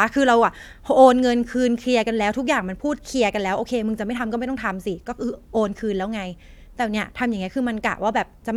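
Speech recording with no audible technical faults anywhere.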